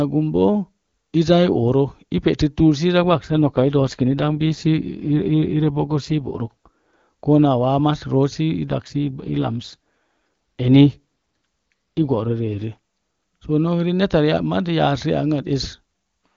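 An AMR rate drop occurs from 3.00 to 6.68 s and again from 8.68 to 12.64 s. In each span the speech turns rougher, grainier and more synthetic, which fits the network forcing the AMR wideband codec down from its top mode to around 8.85 kbit/s to spend bits on error protection. The bandwidth holds and nothing drops out. Clarity returns at each end as the rate climbs back.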